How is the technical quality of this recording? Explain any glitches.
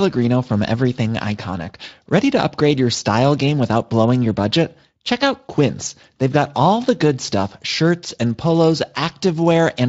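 There are no glitches in the speech recording; the signal stays steady throughout and is carried by a Speex codec at a fairly generous setting, which leaves only the light coding character expected from that path.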